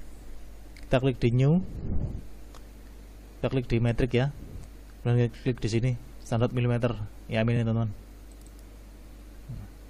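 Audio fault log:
7.56–7.58 s, repeated frames: a block of about 23 ms plays twice, which points to a single compressed frame being decoded again, adding 23.2 ms and a brief stutter. The waveform shows an identical short segment back to back.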